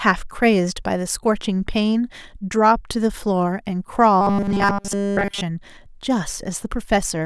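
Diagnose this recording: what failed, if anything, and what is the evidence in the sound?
From 4.21 to 5.41 s the speech collapses into a rigid, metallic buzz pinned at 200 Hz, loosely tracking the syllables. This is robotic sound from repeated short buffers, likely at the driver or buffer stage: fresh audio stopped arriving in time, so the playback path looped the last fragment, apparently for essentially the whole stretch. A 200 Hz buzz fits a segment of about 5 ms repeating while the real audio was skipped.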